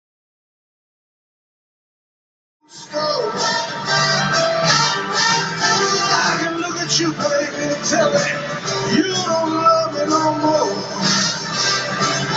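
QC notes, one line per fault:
No faults found.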